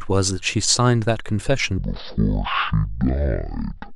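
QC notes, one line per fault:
1.78–3.95 s, stereo read as mono: from 1.78 s to the end, the interleaved left and right samples are being read in sequence as one channel, so each stereo frame takes twice as many samples to play. The speech therefore runs at 0.5x speed and drops 12 semitones, a full octave, sounding slow and deep. The alternating channel values also fold a fainter mirror image of the speech into the upper half of the spectrum.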